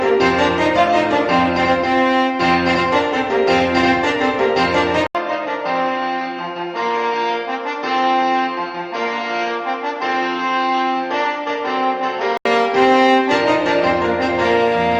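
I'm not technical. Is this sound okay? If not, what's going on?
No. At about 5.07 s the sound drops out for a brief moment, under a tenth of a second, then comes back duller, slightly quieter and with a faint new hiss underneath, as if heard through a cheaper microphone. Everything above about 6.5 kHz is gone. At about 12.45 s it clears up again. This is likely an input switched to a poorer device: the recording briefly moved to a lower-quality microphone or headset, then switched back.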